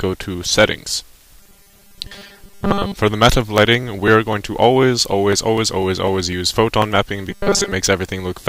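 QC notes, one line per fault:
1.40–2.95 s, robotic sound from repeated short buffers: the audio turns into a rigid, metallic buzz pitched at 200 Hz that only loosely tracks the underlying sound. The likely cause is late-arriving audio, with a 5 ms chunk replayed over and over while most of the real signal is skipped.
7.30–7.72 s, robotic sound from repeated short buffers: the same hard 200 Hz buzz returns briefly, flattening the sound into a mechanical drone. This is likely the same starvation, where repeating a 5 ms segment imposes that fixed pitch in place of most of the missing audio.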